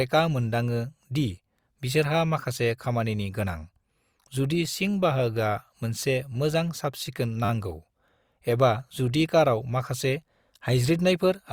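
At 6.00 to 6.02 s, between "जुदि सिं बाहागोआ" and "मोजां साफसिखोन", a repeated buffer occurs: fresh audio arrived late, so the output replayed its last block. A 10 ms slice sounds three times with hard joins, heard as a brief buzzy click. A second repeated buffer follows at 7.45 to 7.49 s, just after "मोजां साफसिखोन", where the same-sized slice plays five times, giving a longer buzz. Essentially nothing is dropped; the sound is only delayed.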